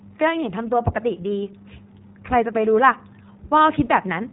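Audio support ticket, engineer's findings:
Speech band-limited throughout, nothing above 3.8 kHz; plainly audible rough, slightly synthetic grain. Cause: iLBC codec, narrowband VoIP path. Excitation coded per 20 ms frame with no carry-over between frames. Roughness fits the 15.2 kbps mode.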